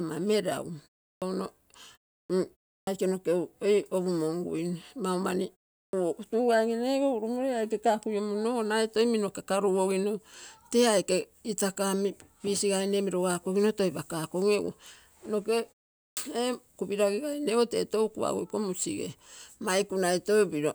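Clipped start after a pause at 1.13, 2.2, 2.79, 5.85 and 16.08 s: after pauses of 0.31 to 0.43 s, the output device sleeps and wakes too slowly, swallowing 81 to 96 ms of each onset, so speech bursts out of silence without its first sounds.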